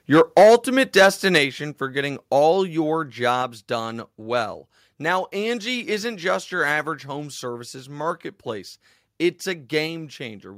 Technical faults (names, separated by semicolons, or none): microphone overload; microphone volume stepped down